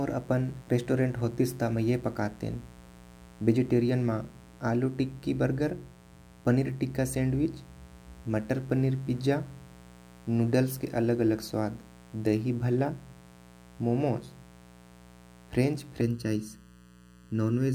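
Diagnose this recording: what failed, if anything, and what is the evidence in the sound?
An analogue wiring fault is letting 60 Hz mains buzz into the signal. The raspy harmonic series sits steadily under the speech for the whole recording at about 25 dB below it, with spikes at each half-cycle reaching well into the kilohertz range.

From 16.01 s to the end, a channel delay (comb filtering) appears at the driver or buffer stage. One channel runs late by under a millisecond, and summing to mono cancels evenly spaced frequencies, starting around 700 Hz, so the speech turns hollow and phasey.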